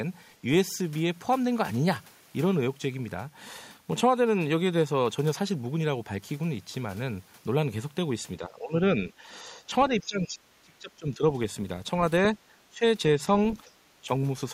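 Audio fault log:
8.39–11.23 s and 12.70–12.84 s, speech suppressed in double talk: the speech level dips in pieces, by about 20 dB at its deepest, totalling roughly one and a half seconds in the first stretch and about 150 ms in the second. This is likely an echo canceller that cannot separate the local talker from loudspeaker echo while both sides speak, so it turns everything down.
10.01–10.05 s and 13.54–13.59 s, other side's voice leaking through: two very short scraps of a second voice, each about 40 to 50 ms, sit behind the speech at about 30 dB and about 25 dB below it. The likely cause is loudspeaker playback of the far end that the echo canceller did not fully remove from the microphone. Unlike a background talker in the room, these scraps are fleeting fragments that appear around the suppressed passages.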